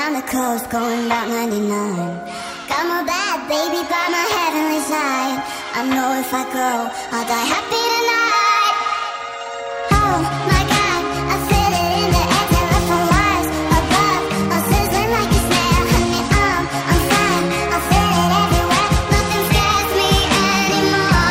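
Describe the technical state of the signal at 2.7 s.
At 2.7 s the signal is intact, with no fault audible at that moment.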